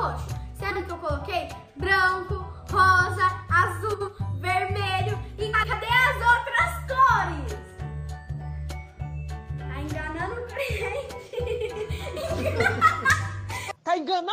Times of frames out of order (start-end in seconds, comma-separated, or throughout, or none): 0.70-0.81, 3.93-4.09, 5.53-5.73